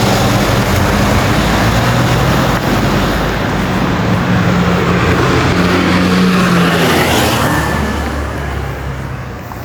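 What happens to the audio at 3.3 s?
At 3.35 s there's a DC step. The zero line of the waveform suddenly jumps to a new offset, and you hear it as a single low thump or click while the sound itself carries on unchanged. The offset doesn't hold. It bleeds away as something acting like a 20 Hz high-pass pulls the baseline back toward zero, so the bump is brief.

That moment also sits inside gain pumping that runs through the whole clip. The gain swings by around 10 dB. Loud and quiet parts end up squashed closer together in level. The likely cause is input gain set far too high, with a fast limiter or compressor clamping down on every peak and then letting go.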